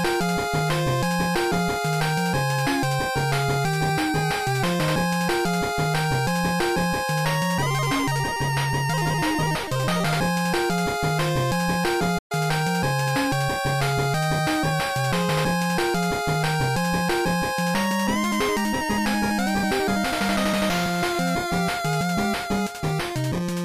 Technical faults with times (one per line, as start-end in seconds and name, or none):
12.18-12.32 playback stall